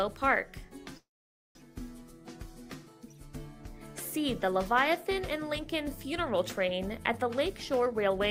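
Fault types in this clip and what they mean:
call audio freeze: from 0.97 to 1.58 s the sound stops and is replaced by about 0.58 s of filler, most of it (about 0.51 s) near-silence after the held sound fades. This is likely packets stalling in transit so the jitter buffer ran dry; when they arrived, playback resumed where it had paused, so nothing is lost but the delay grows by that same 0.58 s.
jitter buffer speed-up: from 7.53 to 8.20 s the audio plays at about 126% of normal speed without any change in pitch, so it sounds rushed. The receiver's buffer was holding more than its target, so it trimmed short pitch-period-sized slices over and over in quick succession, cutting roughly a fifth of a second in all to bring the delay back down.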